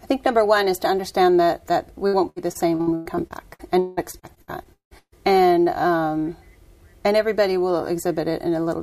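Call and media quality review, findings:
Repeated packet loss (robotic sound), 2.07–5.14 s: 17 gaps up to 178 ms, a third filled by concealment repeating prior sound. Recurring robotic chop, not one isolated dropout.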